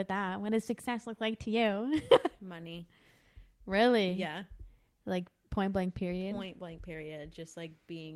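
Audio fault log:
Nothing in this speech recording stood out as a problem on listening.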